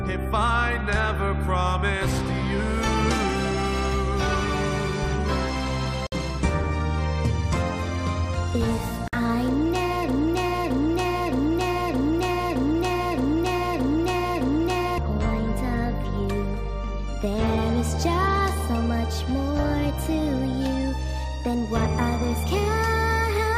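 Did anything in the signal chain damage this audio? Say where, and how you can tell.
Yes. Two gaps at a join of encoded pieces come from the codec stage, where separately encoded segments were spliced without trimming. The sound drops out from 6.07 to 6.12 s (about 55 ms) and from 9.08 to 9.13 s (about 51 ms), then resumes exactly where it left off. Each run's start-up delay and final-frame padding stayed in as silence. On a waveform these are flat dropouts with softened edges. A spectrogram shows thin, empty vertical strips whose borders are slightly smeared by the codec.

From 10.09 to 14.98 s there is a broken-record loop. A 0.62-second fragment repeats back to back eight times, and the audio that should have played in that stretch never arrives. The likely cause is a stall in playback or streaming that kept re-sending the last buffered fragment. On a waveform the same envelope shape recurs at a fixed 0.62 s period. 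A spectrogram shows an identical block of texture tiled horizontally across nearly five seconds.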